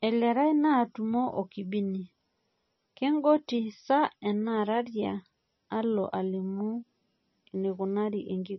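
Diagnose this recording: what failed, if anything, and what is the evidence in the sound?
MP3 compression affects the whole speech clip at the codec stage and is the likely cause. Nothing sounds above 5.9 kHz, and heavy watery, swirling damage fits a bitrate near 25 kbps, where the encoder drops the treble and switches weak frequency lines on and off between frames.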